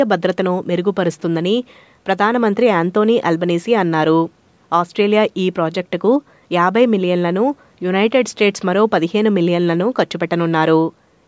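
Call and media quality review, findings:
No findings: the speech passed through call microphone processing with content up to 8 kHz and the lowest bass trimmed as expected.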